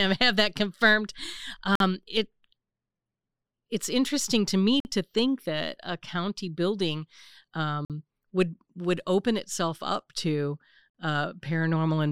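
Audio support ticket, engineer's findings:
Gap between chunks. Hard-edged silent holes of about 48 ms at 1.75, 4.80, 7.85 and 10.90 s, spaced every 3.0 s. One falls after "it's interesting to me". Probable component: chunked delivery or player, inserting silence at each join.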